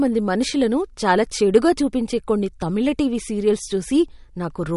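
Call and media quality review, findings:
MP3 compression, throughout the clip. Speech band-limited, nothing above 11.2 kHz. Watery, swirly texture, smeared attacks, chirpy s sounds. Likely an MP3 encoder starved of bits, cutting treble and switching weak frequency lines on and off between frames. Damage fits about 48 kbps.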